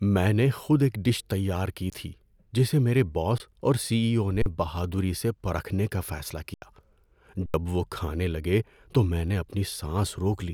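A speech recording with five underruns with held sample. The sound freezes flat at 1.9 s and 3.38 s for 20 ms each, 4.42 s for 40 ms, and 6.54 s and 7.46 s for 80 ms each. The 3.38 s gap falls between "کی تھی جسے میرے" and "اور سی". The 4.42 s one comes just before "بہادری سے پرکھنے کا". The 6.54 s one follows "سے پرکھنے کا فیصلہ". The output buffer ran dry, and the converter held its last value. Speech was lost during each stall.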